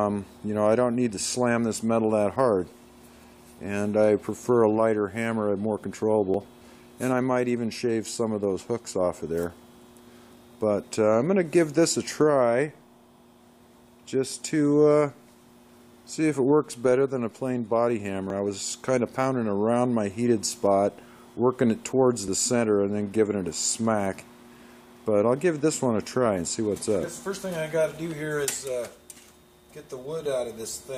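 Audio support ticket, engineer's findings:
Overlap between stream segments: three short skips at 6.34 s, 18.30 s and 22.28 s. Probable component: segmenter or player's segment joiner, 4 s segments. Mechanism: adjacent segment timestamps overlap, so the player trims roughly 6 to 8 ms of audio that was never actually duplicated. The waveform jumps across the gap, producing an audible discontinuity at each join.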